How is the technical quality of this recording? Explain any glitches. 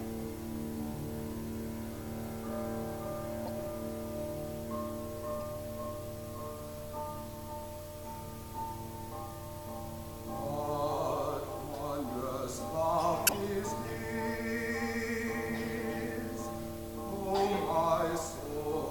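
The recording has three short decoding glitches, all corrupt frame decoded faults: at 3.44 to 3.48 s, a faint one at 5.38 s, and the loudest, peaking near -10 dBFS, at 13.27 to 13.33 s. Damaged compressed frames were played anyway, so misread gains and codes put energy at wrong frequencies for a frame or a few. Each is heard as a chirp or noisy blip rather than the gap or smeared repeat that a lost frame would leave.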